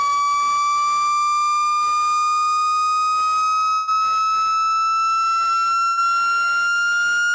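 Two bursts of packet loss, at 3.74 to 3.89 s and 5.87 to 5.99 s: the receiver stretches the last sound into a fading buzz or hiss for about 140 ms and then 100 ms, and the audio jumps ahead with that stretch gone. Nothing above 8 kHz comes through, which fits a wideband call codec.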